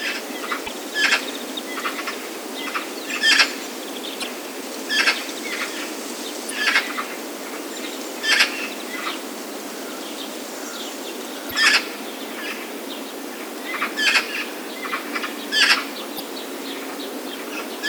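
Five short bursts of damaged data in a compressed stream break into the sound, at 0.64–0.69 s, 4.20–4.24 s, 6.47–6.51 s, 11.48–11.53 s and 16.16–16.20 s. Each lasts about 40 ms. At each point, bytes in the compressed stream are wrong. The decoder misreads those frames and loses sync. It then hunts for the next valid frame header. Each event comes through as a brief chirp, squawk, click or short hole.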